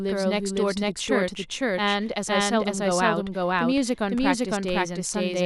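A doubled audio track runs through the whole clip: the speech is heard twice, with a second full-band copy at about the same level trailing roughly half a second behind. The copy has no decay or room colour, likely from a slower capture path recording the audio again.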